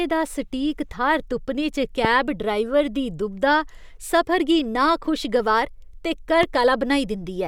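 Loud pops at 2.05 to 2.07 s and 6.43 to 6.45 s, just after "सफर गी नाखुशगवार ते", mar this speech clip, each a single sharp click roughly 15 and 10 dB above the speech, likely a voltage spike from a plug, switch or static discharge added onto the signal.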